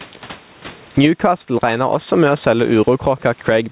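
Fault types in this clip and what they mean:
Gain pumping: Throughout the speech, the gain swings by about 15 dB. The room noise sits about 40 dB under the speech. Loud and quiet passages end up pressed together, so the sound feels squashed. The likely cause is input gain set far too high, with a fast limiter or compressor clamping down on every loud moment.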